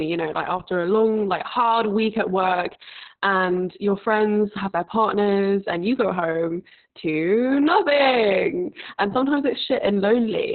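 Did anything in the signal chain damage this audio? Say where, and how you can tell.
Yes: Opus voice compression at the codec stage, throughout. Nothing above 4.3 kHz and hoarse, robotic speech point to narrowband SILK coding at about 6 kbps.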